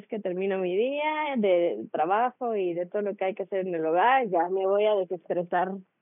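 Speech recording; no technical faults can be heard.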